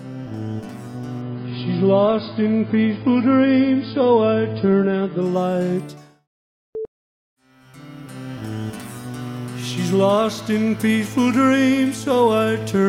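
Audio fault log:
1.22–5.22 s, adaptive stream at a lower bitrate: the sound suddenly goes dull and swirly with nothing above 5 kHz, no gap, as the stream drops to a low-bitrate version while the connection slows.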